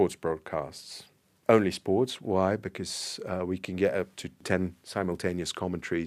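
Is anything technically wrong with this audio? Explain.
No, nothing technically wrong is audible in this speech recording.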